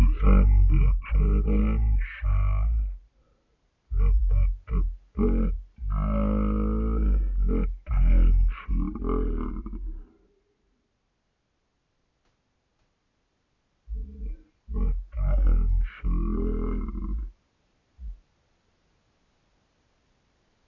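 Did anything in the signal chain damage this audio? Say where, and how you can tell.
Yes, a wrong sample rate at playback, throughout. Speech runs at one third speed and 19 semitones low. That fits 48 kHz samples played at 16 kHz.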